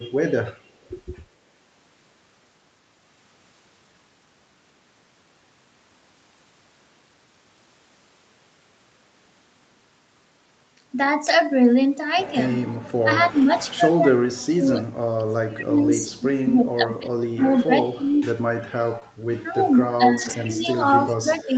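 At 11.27 s a lost packet was rebuilt from error correction. The packet after it carried a low-bitrate copy, and the decoder played that copy, so there is no gap. The 20 ms stretch sounds briefly rougher and noisier. The same repair recurs at 13.37 to 13.43 s, covering 40 ms, at 19.01 to 19.03 s, covering 20 ms, and at 20.17 to 20.31 s, covering 80 ms.

From 13.03 to 14.86 s the speech dips hard, by roughly 30 dB at its deepest. About one and a half seconds are affected. This is likely speech suppressed in double talk. Both ends spoke at once, and the echo canceller could not tell the talker from loudspeaker echo, so it turned everything down. It happens again from 15.18 to 18.27 s, about 25 dB deep, and from 19.51 to 20.87 s, about 20 dB deep. A last, milder episode runs from 21.04 to 21.57 s, about 15 dB deep.

At 18.99 to 19.03 s there is a short concealed packet loss. About 20 ms of audio arrived too late. 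The receiver filled the hole by extending the preceding sound, then blended back in. It is heard as a brief smear or wobble. Error-correction data covered the tail of that gap.

At 20.59 to 20.67 s a faint delayed copy of the sound appears. It trails by 227 ms and sits about 20 dB below the speech. This is likely echo leak. A loudspeaker on one side fed its microphone, and its echo canceller let a residue through. A second scrap comes at 21.34 to 21.43 s, about 25 dB down. The whole clip is limited to 8 kHz by the 32 kbps Opus call path.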